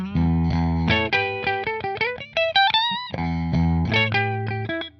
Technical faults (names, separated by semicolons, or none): none